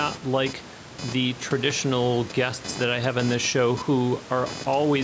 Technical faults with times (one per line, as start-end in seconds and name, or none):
0.00-5.04 computer activity noise